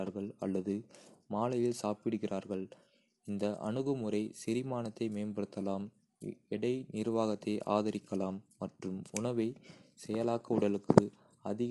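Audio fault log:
Throughout, low-delay AAC compression: the speech sounds rough and grainy all the way through, with a noisy fizz sitting between the harmonics and nothing at all above 11.6 kHz. That's likely the low-delay AAC used on video calls, since its very short frames can't pin down pitch harmonics cleanly and eat up more bits. The damage level fits something around 32 kbps, where the encoder just runs short and smears the detail.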